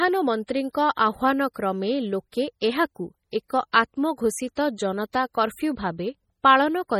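From start to finish the speech has the watery, swirly texture of heavy MP3 compression, likely from a low-bitrate encode, and the damage is strong enough to fit something like 32 kbps. With that few bits, the encoder zeroes weak frequency lines that then flicker in and out between frames, so the s sounds chirp metallically and consonant attacks smear. There's also a hard treble ceiling, with nothing above 17.6 kHz.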